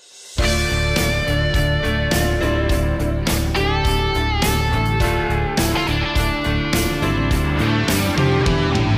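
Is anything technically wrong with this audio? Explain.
No, nothing technically wrong is audible in this audio.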